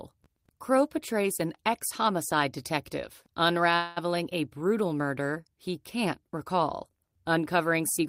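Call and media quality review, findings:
Fading buzz-hiss filling 3.75 to 3.98 s, speech resumes intact 210 ms late: call audio freeze, likely jitter buffer underrun from delayed packets, nothing lost.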